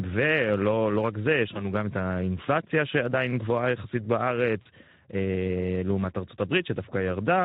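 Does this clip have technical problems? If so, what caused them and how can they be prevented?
Yes. Throughout, the speech sounds hoarse and grainy, with a noisy edge. This is Speex codec damage: the CELP encoder has too few bits to describe the excitation, which fits a Speex stream at around 11 kbps. Prevent it by using a higher Speex quality setting or a more modern codec such as Opus.

At 1.53 to 1.67 s and again at 4.61 to 4.67 s, the speech smears into a brief, fading buzzy tone or coloured noise and stays weak for a moment. This is VoIP packet loss concealed by the speech codec. The decoder filled in about 20 ms of missing audio the first time and about 40 ms the second by repeating its last pitch and filter at falling gain. Because each frame builds on the one before, the distortion lingers a little after the packets return. Prevent it with a more stable network path, forward error correction, or a larger jitter buffer.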